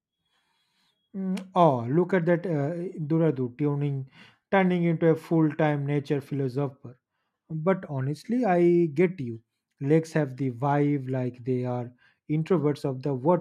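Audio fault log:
No audible faults detected.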